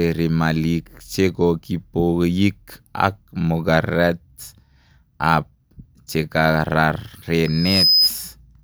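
From 7.45 s to 8.11 s a loudspeaker feedback squeal rises over the speech: a single tone at 5 kHz swelling over roughly 0.4 s to a few decibels above the talker. The microphone is picking up its own loudspeaker, and loop gain there exceeds unity.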